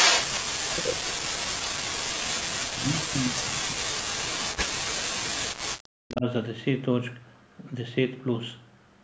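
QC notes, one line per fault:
0.0–0.4 s, echo leak: a second copy of the speech trails the original by about 276 ms, roughly as loud as the talker, so the opening sounds doubled and smeared. The likely cause is a far end playing the call over a loudspeaker, where the echo canceller failed to remove what its microphone picked up from that speaker and sent it back down the line with the round-trip delay.
0.48–1.46 s, 2.41–2.46 s and 2.68–6.25 s, speech suppressed in double talk: the talker's level collapses by something like 40 dB, first for about a second, then in a brief 50 ms gap, then for a long stretch of roughly four seconds, leaving the speech faint or missing in pieces. This is likely the echo canceller meeting simultaneous talk from both sides, failing to separate near speech from loudspeaker echo, and turning everything down together.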